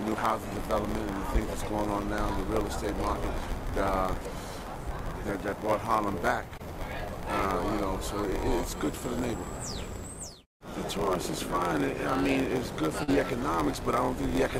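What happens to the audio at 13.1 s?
Between 13.03 and 13.10 s, about 40 ms of audio never reached the decoder in time. The receiver covered the hole with roughly 45 ms of synthesised audio, extending the last sound along its pitch or as shaped noise, then cross-fading back into the real signal. This short concealed packet loss is heard as a brief smear or wobble.

Running through this same moment, and the whole clip, is a padded block size mismatch. One stage delivers blocks shorter than the next stage reads, which fits a 512-sample read, and the shortfall in each block is filled with silence. Those recurring gaps produce a buzz at 86.1 Hz, the block rate, and stretch the audio to 0.938 of its normal speed, about 6% slower, while the timbre stays.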